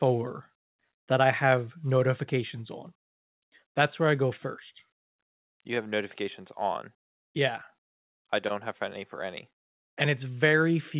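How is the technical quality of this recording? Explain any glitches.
No glitches or technical faults turn up in this recording. It has come through a call path whose narrowband codec leaves nothing above 4 kHz, which gives the speech the familiar telephone-band sound of a G.711 mu-law connection.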